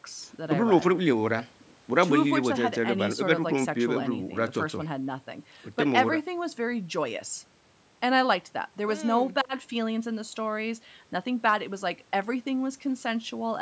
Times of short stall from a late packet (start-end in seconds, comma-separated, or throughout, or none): none